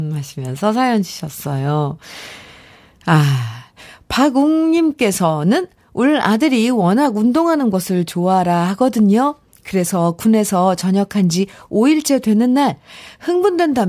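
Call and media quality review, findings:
Nothing stood out on listening to the speech recording, so there are no findings to log for it.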